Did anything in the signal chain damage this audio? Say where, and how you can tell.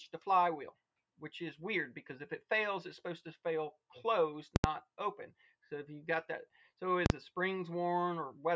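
Yes. Invalid numbers at full scale, from a calculation in processing: the output pins at one extreme value, far beyond the audio's peaks, at 4.56–4.64 s and 7.06–7.10 s, heard as loud bangs, unlike clipping, which follows the audio.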